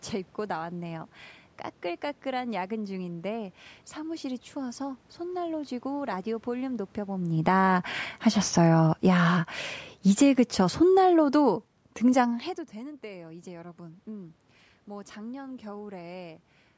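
Automatic gain falling begins at 6.51 s and continues to 12.44 s. The gain control judged the incoming speech too loud and steadily pulled its gain down by about 10 dB over almost six seconds. The level sinks slowly rather than stepping, and the room background sinks with it. That shared drop is what marks it as gain riding, not the talker backing off from the microphone, which happens separately around 7 s and again near 12.5 s.

Automatic gain rising interrupts that descent from 7.56 s to 8.02 s. The control briefly decided the input had become too quiet, likely reacting to the talker's shift just before, and pushed gain back up by about 5 dB in under half a second. Speech and background swell together in a short bump before the slower downward trend resumes. With the two adjustments fighting each other, the level wobbles instead of settling. All of this sits inside the call's normal microphone band, with nothing above 8 kHz.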